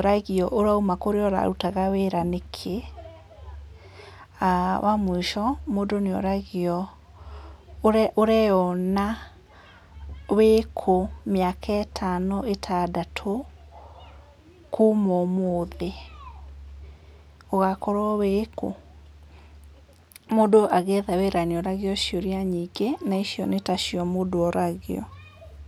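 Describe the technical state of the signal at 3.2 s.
At 3.2 s the speech signal is intact, with no dropout, clipping, glitch or other technical fault at that moment.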